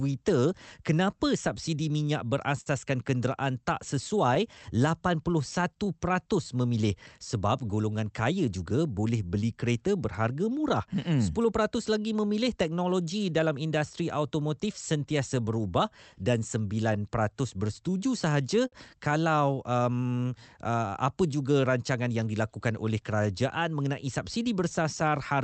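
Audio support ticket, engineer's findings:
Unsteady tempo, small hiccups across 0.12–25.1 s. Speech drags slightly, about 0.7 s longer overall. Probable: clock drift between sender and receiver, sender clock about 3% slow.

Jitter buffer keeps draining, so the receiver makes repeated timing corrections by stretching short pieces. Playback runs near 97% speed. All edits lengthen, unevenly spaced.

Brief ticks and smears, 1.49–5.62 s. A few of them, the longest about 50 ms. Probable: scattered short gaps from lost or late packets. Each patched by continuing the last sound. No content lost.

Three very short smears, 24.01–25.04 s. Same mechanism: scattered short gaps concealed by extending the preceding audio. No content lost.

Sound held too long with a slight buzz or dip, 18.68–18.75 s. Probable: short stall from a late packet. Jitter buffer ran empty, the receiver stretched the last sound by 44 ms, then resumed. 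Nothing missing, but later audio is delayed by 44 ms.

The call-codec path rolls off above about 8 kHz.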